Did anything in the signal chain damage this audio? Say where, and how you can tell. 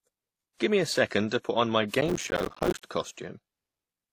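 Yes. Transcoding between lossy codecs, throughout, at the codec stage: mixed smeary and swirly artefacts with nothing above 14.8 kHz, likely from low-bitrate encoding later re-encoded.

Processor overload crackle, 2.01 to 2.84 s, right after "to put on my", at the driver or buffer stage: dozens of short buffers, around 5 ms each, missed their deadlines and dropped to silence, producing gritty tearing.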